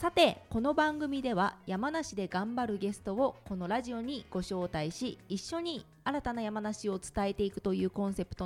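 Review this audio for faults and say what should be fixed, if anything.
Nothing to fix: no faults found anywhere in the audio.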